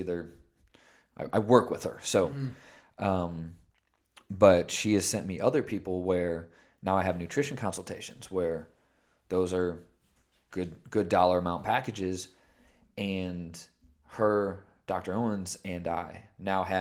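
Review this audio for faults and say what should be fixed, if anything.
Nothing needs fixing: the speech keeps its full bandwidth through Opus voice compression, with only the light coding texture that fits the codec's hybrid mode at around 24 kbps.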